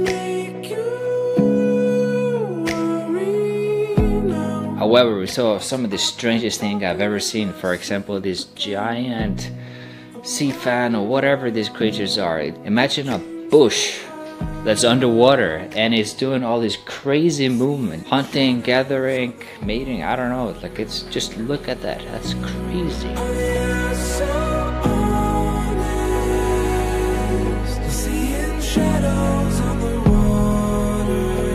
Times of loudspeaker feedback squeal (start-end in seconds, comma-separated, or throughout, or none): none